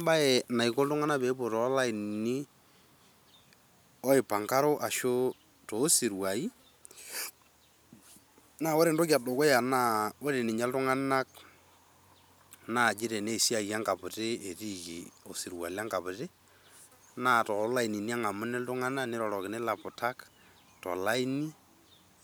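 No technical faults are audible.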